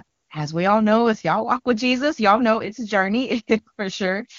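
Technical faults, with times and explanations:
No technical faults are audible in the speech, which carries the band-limited sound of the AMR wideband (HD Voice) codec, with content up to about 7 kHz and a clarity that points to its top rate of 23.85 kbit/s.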